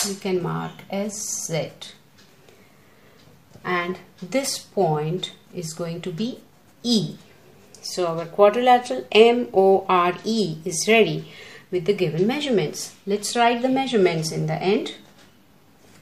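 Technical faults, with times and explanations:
No technical faults are audible.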